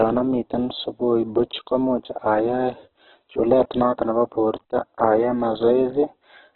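From start to finish the speech has nothing above 4.1 kHz, and what remains sounds rough, grainy and noisy rather than swirling. The likely cause is heavy Opus compression at a rate fitting about 8 kbps, which narrows the bandwidth and fills starved bands with folded or noise content.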